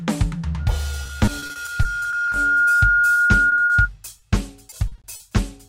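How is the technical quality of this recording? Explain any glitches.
The recording of this music has clear technical problems: a feedback squeal plus network faults that chop and briefly hold the sound.

From 0.59 to 3.89 s, loudspeaker feedback squeal: a microphone re-captures its own speaker, and a single 1.4 kHz tone swells over about two seconds to roughly 5 dB above the music. It is one steady pitch, not a broadband hiss.

Repeated packet loss (robotic sound) appears at 1.03–2.34 s, 3.14–3.72 s and 4.70–5.22 s. Lost packets are patched by extending earlier sound, with holes up to 40 ms, giving choppy music with bits missing.

At 4.20–4.24 s, a short stall from a late packet: the buffer ran dry, so the sound is held about 20 ms longer, but unlike the packet loss, nothing is missing.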